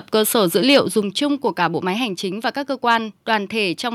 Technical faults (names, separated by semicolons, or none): microphone overload; microphone volume stepped down